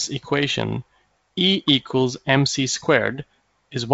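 Nothing stood out on listening to this speech, which carries the band limit of G.722 wideband telephone coding at 64 kbit/s, with no content above 7.8 kHz.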